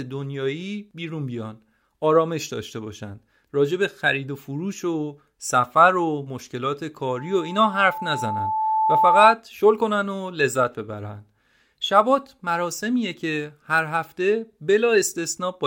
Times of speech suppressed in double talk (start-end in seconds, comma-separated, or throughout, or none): none